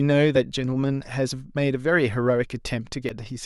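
At 0.35 to 0.37 s and again at 3.09 s the speech breaks up briefly, the sign of damaged data in a compressed stream. Corrupted bytes make the decoder misread frames and lose sync while it searches for the next frame header.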